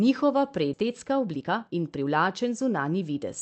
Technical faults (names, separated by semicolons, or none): skip ahead; jitter buffer speed-up